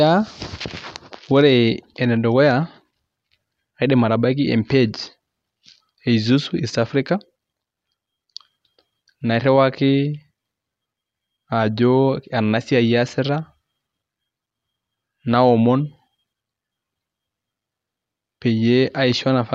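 From 6.52 s to the end at about 19.5 s, the resampler restarted on every block. It treated each 40 ms block separately, perhaps converting 44.1 kHz to 48 kHz, leaving an error at each edge. This makes a 25 Hz buzz that appears only with speech, not a constant hum.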